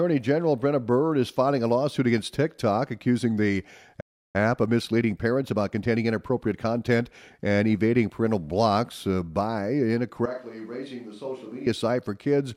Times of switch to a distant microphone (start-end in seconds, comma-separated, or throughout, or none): 10.26-11.66